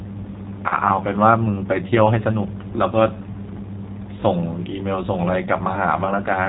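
Throughout, the speech sounds slightly rough and synthetic, with nothing above 4 kHz, plainly audible G.729 codec damage. The band limit and texture point to an 8 kbit/s G.729A link rebuilding each frame from a vocal tract filter, pitch predictor and a few pulses.

From 0.69 to 0.76 s, and again from 5.75 to 5.81 s, the speech smears into a brief buzzy tone or coloured noise that fades before recovering. This is VoIP packet loss concealed by the speech codec, consistent with a single lost 20 ms packet each time, where the decoder extended its last pitch and filter at falling gain.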